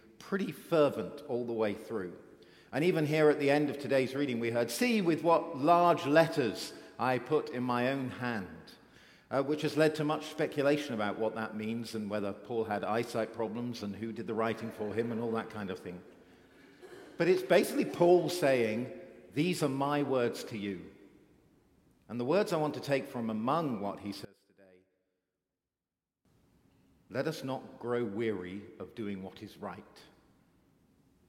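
From 24.25 to 26.25 s the sound drops about 24 dB, likely one channel inverted, so the shared centre cancels when folded to mono.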